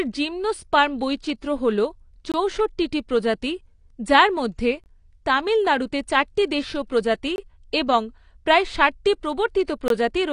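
Throughout this speech recording the sound is dull and smeared, with a fizzy, warbling edge on sibilants and sustained sounds, and nothing survives above 10 kHz. That combination of a hard treble cut-off and smeared texture is the plainly audible signature of AAC compression, likely AAC-LC at a low rate, around 32 kbps. At that rate the encoder drops the upper band and coarsely quantises what remains. Four short holes of about 21 ms also break the sound at regular 2.5 s intervals: 2.32–2.34 s, 4.84–4.86 s (between "প্রজাতি যার মধ্যে" and "তামিলনাড়ুতে চারটি দেশীয় প্রজাতি"), 7.36–7.38 s (before "এবং প্রায় ষাটটি"), and 9.88–9.90 s. This is a gap between chunks. The audio was handled in 2.5 s pieces, and a stretch of silence was inserted at each join, a length that fits one frame of codec padding. Nothing is lost, but the flow is audibly interrupted each time.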